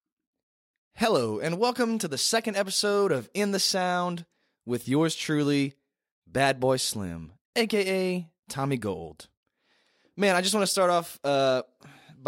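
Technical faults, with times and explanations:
No technical faults can be heard in this speech.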